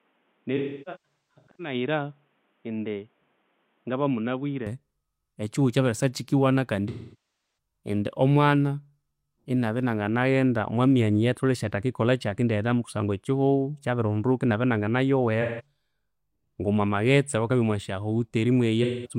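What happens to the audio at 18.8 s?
Right at the end of the clip, from 18.83 to 19.13 s, there's AAC frame loss with concealment. Roughly 213 ms of coded audio goes missing, about five frames' worth, and the decoder patches the gap by stretching the last good spectrum, so you hear a smeared, phasey stretch of sound.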